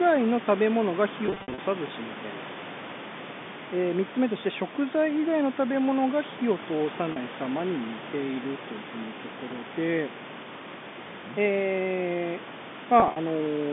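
Speech carrying packet loss with pitch repetition at 1.26 to 1.58 s, 7.12 to 7.16 s and 13.00 to 13.16 s. About 200 ms of audio goes missing in scattered runs of up to 60 ms across the first span. The second gap is a single 40 ms dropout, and the last loses about 80 ms over 160 ms, which fits 20 ms packets. Each gap is patched by looping the last pitch cycle, so the short gaps sound briefly held and buzzy, while the longest runs fade into silence. On a spectrogram these show as frozen, evenly spaced harmonic stripes, and the waveform repeats one identical cycle before the normal signal cross-fades back. Above the line band the spectrum is empty, consistent with telephone coding.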